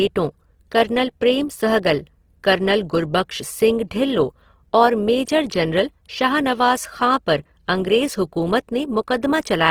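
A speech clip with Opus compression damage throughout. The voice sounds grainy, rough and noisy rather than swirly, and the damage is plainly audible. Bands are refilled with noise when bits run short. The likely cause is music-mode encoding at about 16 kbps.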